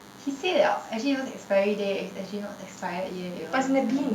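Throughout, a DECT cordless phone buzz sits well below the speech: radio bursts every 10 ms, rectified by the circuitry, give a thin 100 Hz rasp rich in harmonics, edgier than smooth mains hum.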